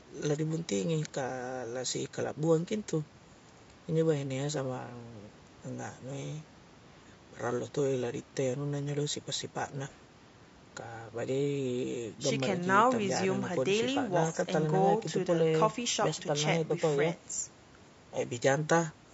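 From start to finish the speech carries a rough, grainy texture, with noise filling the gaps between pitch harmonics and a thin, synthetic-sounding top band. The likely cause is low-delay AAC compression of the AAC-ELD kind used for video calls. Its short frames resolve harmonics poorly, so at a constrained rate the coder smears energy between them and rebuilds the highs parametrically. The plainly audible damage fits a bitrate of about 32 kbps.

At about 16.67 to 16.71 s there is a brief smeared, noisy patch, roughly 30 to 40 ms long. This is AAC frame loss with concealment. A piece of the stream never reached the decoder, which filled the gap by extrapolating from the last good spectrum with randomised or interpolated content, so the fine detail turns phasey for a moment before normal decoding resumes. The length points to a single lost frame.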